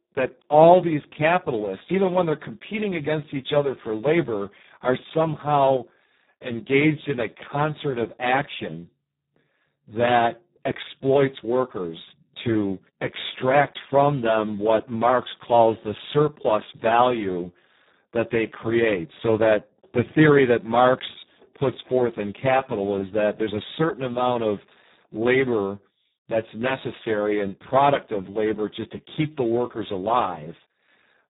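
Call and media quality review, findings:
Speex codec damage, whole clip: hoarse, buzzy, near-robotic speech, nothing above 3.8 kHz; starved CELP excitation, which fits about 4 kbps. Unlike plain band-limiting, the voice texture itself is degraded.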